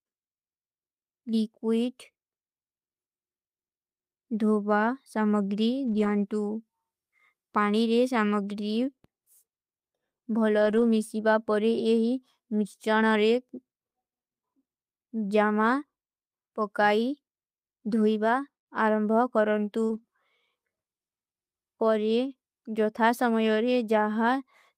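From 5.87 to 6.09 s, the speech turns rough and grainy for about 120 ms. This is a lost packet rebuilt from error correction. Several packets never arrived. The packet after each one carried a low-bitrate copy, and the decoder played that copy instead. There is no gap, only a coarser, noisier stretch. The same thing happens from 10.57 to 10.83 s, now about 140 ms long. The length fits six or seven lost packets.

At 19.85 s comes a short concealed packet loss. About 40 ms never reached the decoder in time. The receiver extended the last sound to cover the hole, then blended back into the real audio. It comes across as a brief smear or wobble. Right after it, from 19.89 to 19.99 s, a further 60 ms is rebuilt from error correction. That stretch has the same rough, noisy texture.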